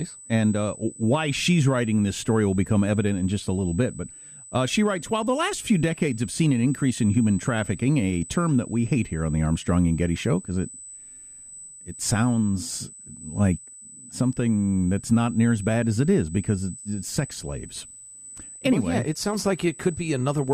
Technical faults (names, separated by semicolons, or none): USB whine